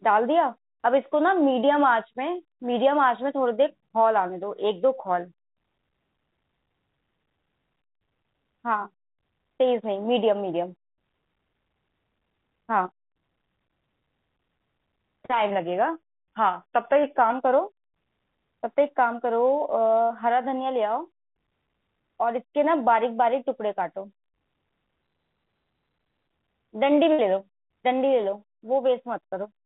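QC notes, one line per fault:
12.86–12.90 s, short concealed packet loss: a brief smear or wobble in the speech, where about 20 ms of audio arrived too late and the receiver extended the preceding sound to cover it.
15.50–17.30 s, drift correction step: the speech drags about 5.8% slower and drops roughly a semitone (about 104 cents) before snapping back, likely a clock-matching rate change.
20.02–20.12 s and 27.13–27.20 s, burst of packet loss: a held buzz or fading hiss replaces 80 ms, then 60 ms, of lost packets, and the speech resumes with that stretch missing.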